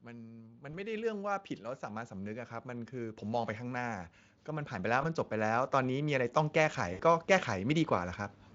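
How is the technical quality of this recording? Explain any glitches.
The recording has two audible problems: a slow, steady swell in level and three brief dropouts filled in by the codec. The Speex coding itself adds little audible damage.

Automatic gain rising runs from 0.05 s to 8.2 s. The automatic gain control judged the input too quiet. It kept raising its gain, by about 18 dB in total. The speech and the background noise grow louder together, gradually, across nearly the whole clip.

VoIP packet loss concealed by the speech codec occurs at 0.71–0.74 s, 5.01–5.06 s and 6.93–7.02 s. The first two fit one lost 20 ms frame each, and the third fits three frames, about 60 ms. The decoder extended its last pitch and filter with fading gain. Each gap sounds like a short stretched tone or noise that fades.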